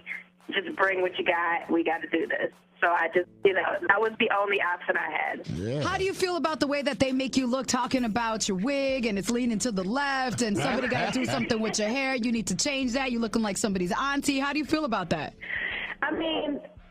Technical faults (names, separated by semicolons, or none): none